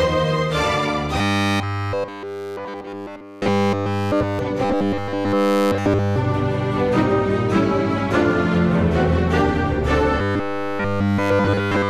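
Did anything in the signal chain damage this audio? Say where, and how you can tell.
Yes. The damage is at the driver or buffer stage. There is robotic sound from repeated short buffers from 1.18 to 4.39 s, 4.65 to 6.16 s and 10.19 to 11.89 s. In each stretch the sound becomes a rigid, metallic buzz at 100 Hz, and nearly all of it is affected. That pitch fits a roughly 10 ms block being replayed. The likely cause is audio arriving too late, so the last block repeats while real sound is dropped.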